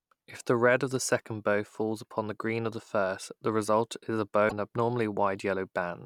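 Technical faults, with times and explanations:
4.48–4.53 s, broken MP3 bit reservoir: the stream most likely lost frames, so the next MP3 frame reached back into the bit reservoir for data it had stored in earlier frames and decoded bytes belonging to a different frame instead. The speech jumps forward, and the roughly 44 ms after the cut is decoded from the wrong data. That span is under two frames, which fits frames of about 26 ms each.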